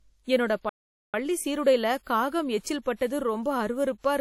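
A speech recording that was likely first squeezed through a low-bitrate codec and then re-saved as a high-bitrate MP3 shows low-bitrate audio saved at a high bitrate. The large file restores nothing: the artefacts of an earlier encode near 48 kbit/s remain. The player likely ran out of data or was blocked, causing a playback stall from 0.69 to 1.14 s. The speech cuts off mid-flow into roughly 0.44 s of silence before resuming at "சீருடைல காகம்".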